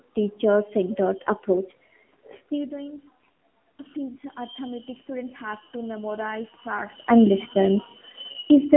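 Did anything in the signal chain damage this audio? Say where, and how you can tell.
Yes. At the codec stage, the AMR narrowband mobile codec cut everything above 3.8 kHz throughout and left the speech audibly buzzy and synthetic, which fits a low rate near 7.4 kbps.

In call processing, from 3.93 to 6.99 s, the automatic gain control rose by about 5 dB after the input dropped by about 15 dB, so voice and background swell together.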